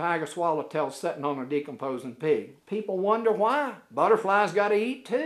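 No technical fault can be heard anywhere in this audio.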